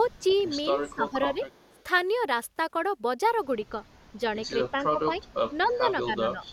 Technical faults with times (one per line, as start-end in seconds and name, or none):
0.09-0.43 echo leak
0.83-1.79 speech suppressed in double talk
1.50-1.83 echo leak
4.01-4.13 echo leak
4.71-5.27 speech suppressed in double talk
5.25-5.34 echo leak
5.63-6.45 speech suppressed in double talk
6.46-6.52 echo leak